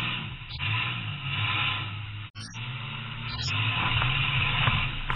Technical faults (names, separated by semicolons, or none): corrupt frame decoded; corrupt frame muted